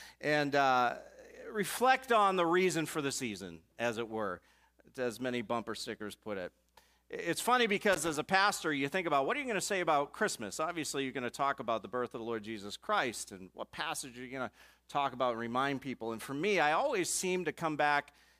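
At 7.93 s a burst of loose connector crackle begins and runs for about a quarter of a second, to 8.18 s. A worn or dirty contact in the signal path is making and breaking in quick succession, chopping the audio on and off. What separates it from a digital glitch or a single dropout is its irregularity: a ragged, scratchy cluster of clicks with no steady rhythm.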